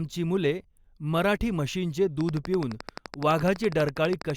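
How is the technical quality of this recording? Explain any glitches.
The recording has one clear fault. From 2.21 s to 4.31 s, right after "मुले मराठी म्हशींचे", a train of clicks appears. Interference or a faulty connection is likely injecting a pulse 11.9 times a second, producing regular ticking. There are roughly thirty clicks, peaking around 10 dB above the speech.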